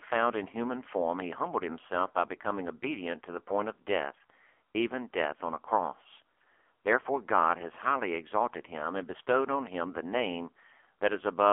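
Throughout, the speech has been squeezed through the AMR narrowband mobile codec at a low rate, consistent with the 5.9 kbps mode, on a 300 Hz to 3.4 kHz phone line. Nothing above 3.4 kHz survives, and heavy coding damage leaves the voice buzzy and synthetic.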